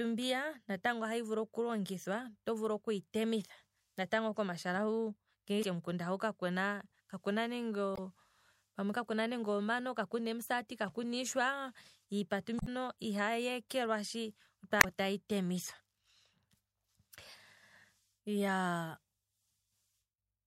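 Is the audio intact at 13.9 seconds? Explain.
Yes, at 13.9 seconds the speech is intact, with no dropout, click, distortion or other fault to be heard at that point.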